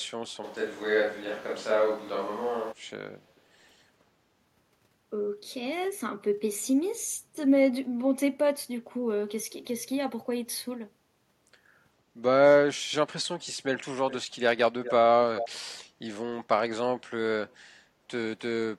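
From 0.45 to 2.71 s the speech turns roomy and hollow, with thinner low end, then snaps back just as abruptly. This sounds like a switch to a distant microphone, likely because the close microphone dropped out and a far pickup filled in. The loudness stays about the same, but room noise rises to roughly 25 dB below the speech. On a spectrogram the low frequencies thin out, reverberant tails smear each syllable, and the noise floor between phrases lifts, with hard edges at both ends.

From 13.76 s onward, brief ghostly repeats of the speech trail it by 416 ms. These are echo leak, likely from a loudspeaker on the far end whose echo canceller let part of the signal back through. The repeats come at 13.76, 14.1, 14.84, 15.36 and 17.49 s, each lasting well under a fifth of a second. The ones at 14.84 and 15.36 s are the loudest, only about 10 dB down, and the one at 17.49 s is barely audible. 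In a waveform they show as small bursts, and a spectrogram shows faint, fragmented copies of earlier speech patterns offset in time.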